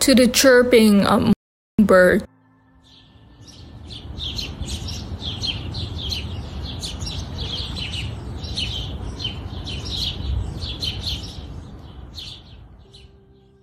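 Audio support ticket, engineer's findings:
Hard cut to total silence at 1.33 s, back at 1.79 s, about 460 ms lost, no room tone. Audio dropout to silence, likely input link lost while recorder kept writing silence.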